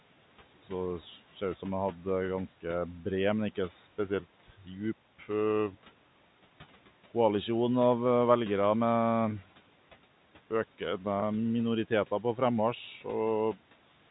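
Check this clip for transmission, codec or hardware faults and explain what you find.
Two faults stand out: a brief dip in the speech from the noise suppressor, and a single short packet loss concealed by pitch repetition.

Between 4.44 and 4.68 s, speech was cut by the noise suppressor. The suppressor misjudged part of the speech as background noise and pulled its gain down along with the noise, by about 9 dB at the deepest point. Around 150 ms of the sound in that window is affected. The result is a short stretch where the speech turns faint and slightly swallowed, as if it briefly drops back from the microphone.

From 11.20 to 11.22 s there is packet loss with pitch repetition. About 20 ms of audio never arrived, which fits one lost packet. The receiver filled the hole by repeating the last pitch period and fading it out. Because the gap is so short, the repeat never decays to silence. 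It is heard as a tiny held, buzzy instant before the speech carries on.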